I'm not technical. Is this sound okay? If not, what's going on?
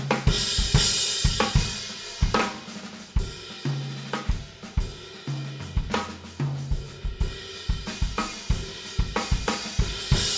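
Yes, this sound is okay. Nothing in it stands out as a technical problem.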